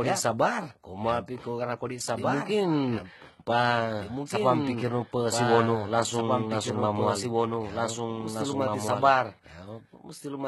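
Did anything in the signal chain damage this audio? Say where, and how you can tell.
Yes. A doubled audio track runs through the whole clip, likely from the signal being captured twice, with a second, slower path or an editing step mixing in a late copy. The speech is repeated about two seconds behind itself, a few decibels quieter than the original, at full bandwidth and with no reverb or room tail, so it sounds like a clean overlapping replay rather than an echo. That fixed offset points to a duplicated route in capture or storage, not to room acoustics.

The codec stage is the other problem. The whole clip shows heavy HE-AAC compression, likely at a very low bitrate; the amount of damage fits something around 16 kbps. Only the lower band is really coded, and the treble is rebuilt by copying lower bands upward under a coarse envelope. The top end stays bright but is synthetic, with harmonics that don't line up across the crossover, so sibilants come out gritty, metallic or lispy.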